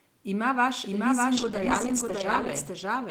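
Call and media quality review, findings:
Doubled audio track, whole clip: full-band copy trailing roughly 0.7 s behind the original at about equal level, dry, no decay or room colouring. Likely cause: second capture path or misaligned edit mixing the same stream in twice.

Call bitrate drop, 1.36 s to end: coarse, watery, dulled sound as bandwidth estimate falls and encoder rate goes from 32 kbps to 10 kbps, bottoming out for 1.02 s. Opus quantises harder and trims the high band at this rate; no recovery before clip ends.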